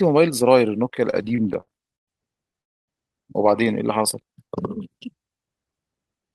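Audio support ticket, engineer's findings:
Repeated stalls (stutter), 1.05–2.09 s: twelve gaps with 302 ms of concealment in all, longest 117 ms, about 29% of the span. Jitter buffer repeatedly ran dry, and the last sound was extended each time. Nothing dropped. Waveform shows repeated stretched cycles. Spectrogram shows smeared, flattened harmonic bands.

Call audio freeze, 2.62–2.90 s: audio stops for 0.26 s of silence, then resumes where it left off with nothing lost. Likely cause: packets held in transit that emptied the jitter buffer, adding 261 ms of delay. Waveform is flat there. Spectrogram shows a blank vertical band.

Jitter buffer slow-down, 3.98–4.50 s: playback runs at 90% speed with pitch unchanged, adding 58 ms. Receiver repeated single pitch periods to rebuild its reserve. Waveform shows near-identical consecutive cycles. Spectrogram shows steady harmonics stretched horizontally.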